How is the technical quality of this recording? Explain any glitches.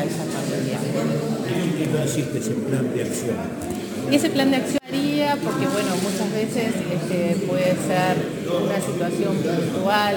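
The recording is compromised by a single continuous fault. Sample clock jitter runs the entire length: timing wobble of around 10 microseconds mistimes samples, adding hiss-like roughness roughly 25 dB below the signal, strongest on loud, bright passages.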